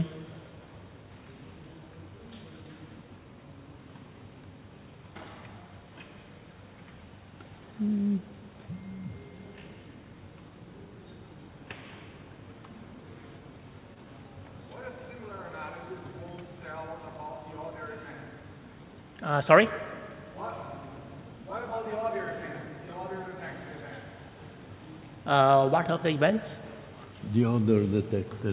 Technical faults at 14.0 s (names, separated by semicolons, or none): short stall from a late packet